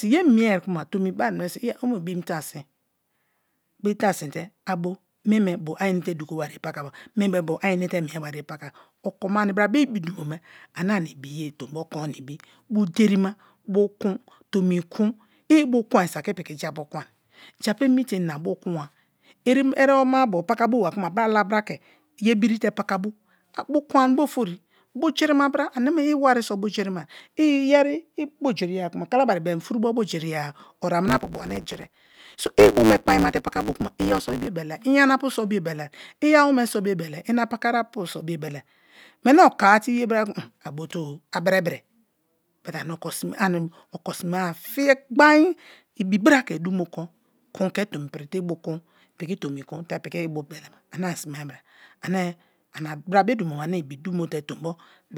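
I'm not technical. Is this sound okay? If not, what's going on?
No. A block size mismatch (truncated) from 31.07 to 34.48 s, ending before "iyana pu so biobelai", drops each block's end, causing a 109 Hz buzz and 1.16× faster speech.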